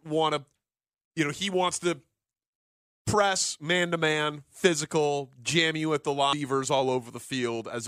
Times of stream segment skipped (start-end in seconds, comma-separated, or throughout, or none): 6.32